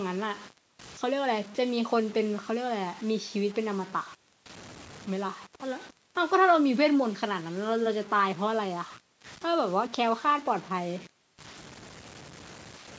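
A gritty, grainy distortion rides on the speech from start to finish, changing character with every syllable, while the quietest passages sputter or drop out to silence instead of fading smoothly. The likely cause is low bit depth without dither: the audio appears to have been truncated to roughly six bits, so the rounding error tracks the signal and sits only around 20 dB beneath it. The band-limiting to 8 kHz from the call's microphone processing is separate from this fault.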